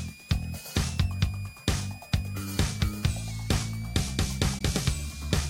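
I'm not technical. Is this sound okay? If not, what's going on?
No. A switching supply whistle runs through the whole clip: a faint high whine wandering between 2.2 and 2.7 kHz, from a power supply pulsing audibly. A Bluetooth dropout cuts the sound from 4.58 to 4.61 s; a brief hole, likely from late wireless packets, before playback carries on.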